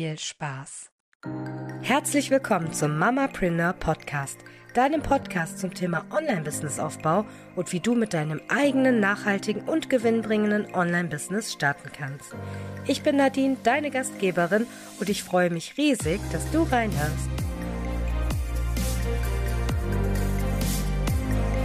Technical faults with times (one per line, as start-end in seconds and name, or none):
5.23-6.53 channel delay (comb filtering)